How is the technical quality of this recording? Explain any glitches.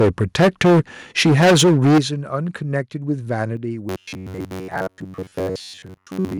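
The recording has three kinds of fault: clipped peaks early on, two sudden drops in level, and a mechanical buzz that takes over the final stretch.

From 0.0 to 0.8 s and again from 1.18 to 1.99 s, the speech has a harsh, crackling edge on its loudest moments. This is microphone overload, likely from an input gain set too high. The peaks drive about 11 dB and then about 15 dB past the converter's limit, so their tops are flattened. Roughly a fifth of the samples are clipped in the first stretch and close to a third in the second.

At 1.98 s, right as the second distorted passage ends, the whole sound drops abruptly by about 12 dB. At 3.57 s it drops again by about 4 dB. Both the speech and the background fall together, with no fade. That pattern points to the microphone volume being stepped down, likely by call software reacting to the overload and cutting the device's input gain in single steps.

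From 3.89 s to the end, the speech turns into a rigid, metallic buzz that only loosely follows its shape, with a buzz near 93.8 Hz. This is robotic sound from repeated short buffers, likely caused by audio arriving too seldom. The gaps are filled by replaying the last short block, while most of the real audio, roughly 70 percent, is skipped. The buzz frequency fits a block about 10.7 ms long repeating over and over.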